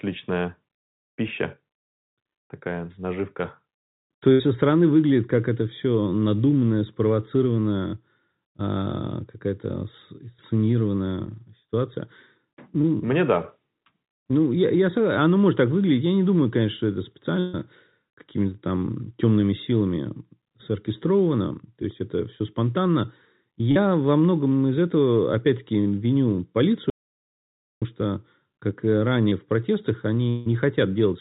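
At 4.32 to 4.41 s there is a burst of packet loss. About 80 ms of audio never arrived. The receiver stretched the last sound to fill it, so it is briefly held and fades. Speech resumes at "со стороны выглядит как", with the gap missing.

At 12.81 to 12.85 s comes a short concealed packet loss, about 20 ms. The decoder extrapolated the last sound and blended back. It is heard as a tiny smear. The same happens at 23.71 to 23.77 s, about 40 ms, and at 29.29 to 29.33 s, about 20 ms.

A second burst of packet loss runs from 17.39 to 17.55 s. About 140 ms is lost. Concealment fills all of it, so a longer hold decays instead of going silent.

From 26.9 to 27.82 s there is an audio dropout to silence. For over nine tenths of a second the sound stops dead. No room tone remains. The likely cause is a lost input while recording continued writing silence. Speech returns with "что как".

Just after "в протестах", from 30.29 to 30.48 s, a long network dropout removes about 160 ms. 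The last sound is held and fades. The likely cause is a stall in delivery. The narrowband sound, with nothing above 4 kHz, fits a G.711 call path.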